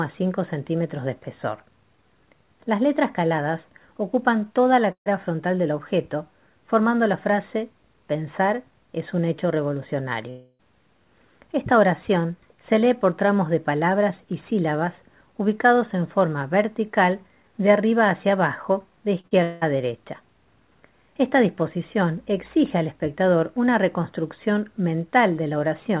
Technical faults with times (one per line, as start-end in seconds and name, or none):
4.92-5.08 burst of packet loss
10.30-10.61 long network dropout
19.21-19.33 short concealed packet loss
19.43-19.63 long network dropout